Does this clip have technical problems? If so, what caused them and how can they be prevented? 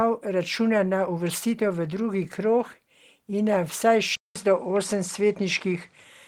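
Yes. At 4.16 s the speech cuts out for about 200 ms. When it returns, it runs to the end with nothing above 10.2 kHz, so it sounds duller. A faint new background noise sits well below the speech, and the loudness stays about the same. This pattern points to an input switched to a poorer device, likely a change to another microphone or a headset's call profile mid-recording. To prevent it, lock the input device and disable automatic switching before recording.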